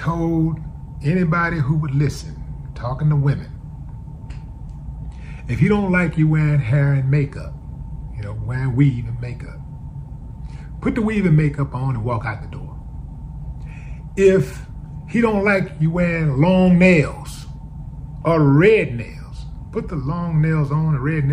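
No technical faults can be heard anywhere in this audio.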